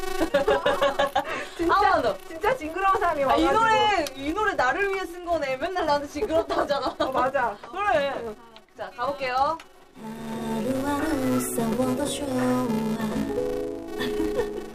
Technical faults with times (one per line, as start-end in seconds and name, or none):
0.00-14.75 filter restarted on every block